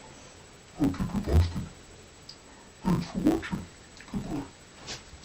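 Throughout the audio, the sound is dull and robotic, with a steady buzz at 100 Hz and no clear octave drop. This points to interleaved audio read as planar in 10 ms blocks. Each block's alternating left and right samples are split so the first half is taken as left and the second as right. Both channels then play at half speed inside each block, and the block boundaries repeat 100 times a second.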